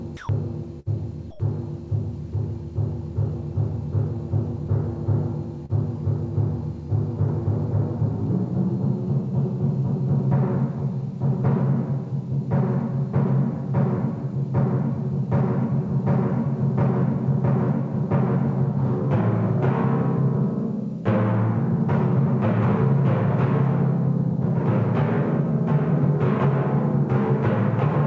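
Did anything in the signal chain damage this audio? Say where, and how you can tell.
Yes. In call processing, the sender's voice detector likely took the sound for background and stopped sending at 0.17–0.29 s and 1.31–1.40 s. This sound dropped by the voice detector gives way to steady comfort noise for 120 ms and 90 ms until transmission resumes.

On the network, a burst of packet loss at 0.80–0.89 s left about 60 ms undelivered. The receiver stretched the last sound across the gap, fading it as a held buzz or hiss, then resumed further on with that stretch missing.

A short concealed packet loss at 5.66–5.72 s removed about 30 ms before decoding. The receiver synthesized a continuation of the preceding sound and cross-faded back, leaving a brief smear or wobble.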